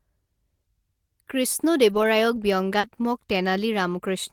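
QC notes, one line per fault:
1.89 to 3.05 s, scattered short gaps: about three brief dropouts, the longest around 40 ms, where packets went missing or arrived late in this speech. The receiver papered over each hole by extending the last bit of sound, so you get little ticks, smears and hiccups.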